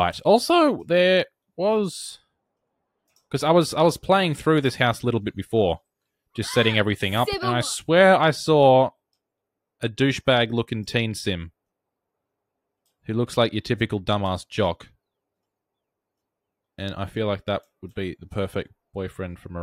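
No technical faults can be heard anywhere in this recording.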